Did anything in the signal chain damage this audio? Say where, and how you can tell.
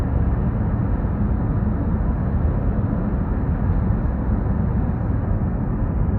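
No, nothing in the chain audibly damaged this sound.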